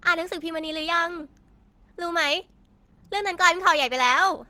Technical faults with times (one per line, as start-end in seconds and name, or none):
0.00-4.49 Opus compression